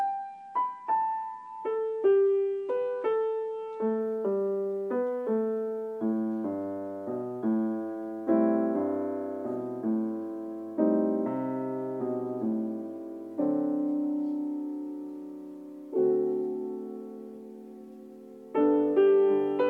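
For the first 4 s the sound is dull and smeared, with nothing above about 9.8 kHz and stronger coding artefacts; at 4.0 s it abruptly brightens and cleans up, with no gap or dropout. This is an adaptive stream starting at a low bitrate: playback began on a cheap version to get going quickly, then stepped up once the connection was measured. The limited top end and artefacts fit roughly 32 kbit/s AAC-LC, moving to around 96 kbit/s.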